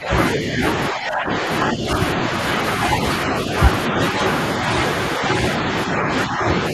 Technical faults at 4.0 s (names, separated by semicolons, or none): none